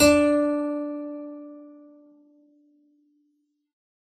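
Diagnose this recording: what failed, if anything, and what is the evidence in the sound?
The fault sits at the codec stage. Throughout the music, nothing is present above 14.1 kHz, and the smeared, watery artefacts of a very low-bitrate encode are audible. This is likely low-bitrate audio saved at a high bitrate as MP3. The re-encode cannot restore what was discarded.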